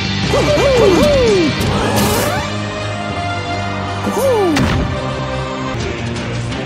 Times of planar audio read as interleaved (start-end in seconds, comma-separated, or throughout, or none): none